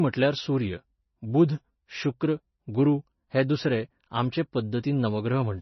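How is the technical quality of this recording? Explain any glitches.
Quality is poor, with one fault running through the whole recording. Likely MP3 compression: the speech has nothing above 5.9 kHz, the damage is heavy, and the sound is watery and swirly. That fits a very low bitrate, around 24 kbps. Short of bits, the encoder drops the treble and switches weak frequency lines on and off between frames. On a spectrogram this shows as a flat ceiling at 5.9 kHz and flickering, patchy energy below it.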